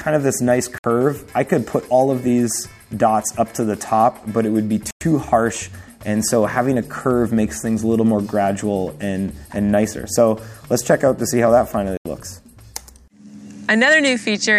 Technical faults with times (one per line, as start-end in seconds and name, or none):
0.78-0.84 Bluetooth stall
4.91-5.01 Bluetooth stall
11.97-12.06 Bluetooth stall